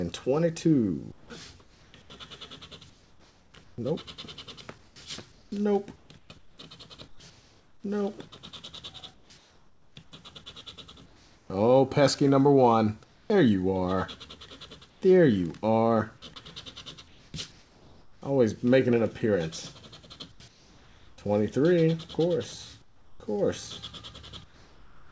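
Right at 1.12 s there's a short bit of sound dropped by the voice detector: about 70 ms of real sound is lost and replaced by flat hiss until 1.30 s. The sender's detector likely mistook a quiet stretch for background and stopped transmitting, so the receiver filled the gap.

From there the gaps carry comfort noise in place of the background: 1.12–7.84 s, 9.14–11.50 s, 13.04–13.30 s, 14.90–15.02 s (about 2 dB quieter), 17.08–18.22 s, 20.32–21.18 s, and 22.82 s to the end. Each time, the real room detail gives way to a smooth, featureless synthetic hiss. Transmission pausing between bursts of sound is the likely reason. Everything sits under an 8 kHz ceiling, which fits a G.722 call path.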